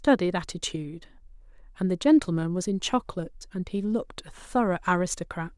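Speech recording, no technical faults detected.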